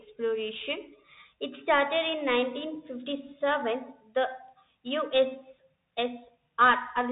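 The whole clip carries Bluetooth CVSD headset codec damage, plainly audible. Nothing passes above 3.8 kHz, so the speech sounds narrow and boxy. The one-bit encoder's adaptive step cannot track fast changes, leaving a gritty, granular edge. This fits a 64 kbps CVSD link.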